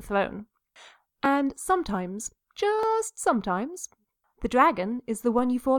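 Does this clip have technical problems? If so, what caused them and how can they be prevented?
Yes. At 1.25 s and 2.83 s the speech jumps forward with no gap, roughly 20 ms missing each time. This is likely a dropped buffer (overrun): samples were overwritten before being read. Larger buffers or higher-priority capture threads prevent it.

At 5.39 s a DC step shifts the waveform's zero line, heard as a low thump, and the offset then decays through a high-pass filter near 2 Hz. Keeping offset-carrying inputs from switching mid-recording and allowing converters to settle prevents it.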